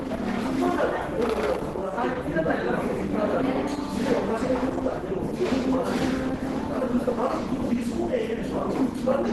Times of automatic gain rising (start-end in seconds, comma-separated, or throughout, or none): none